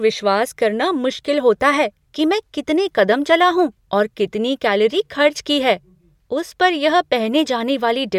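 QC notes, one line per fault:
No faults heard in this speech recording; nothing to log.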